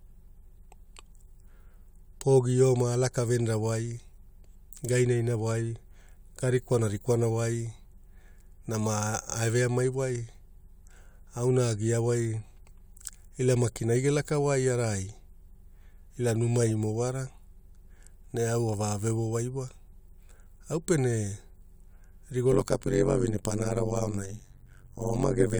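From 22.52 s to the end at 25.60 s, the speech carries overlap-add ripple. The frames were rejoined with overlaps whose windows don't sum to a steady gain, so the level dips by about 60 dB once per frame, around 100 times a second, giving a harsh, buzzy robotic flutter. On a waveform the envelope is chopped into regular deep notches; a spectrogram shows evenly spaced vertical stripes and sidebands around harmonics.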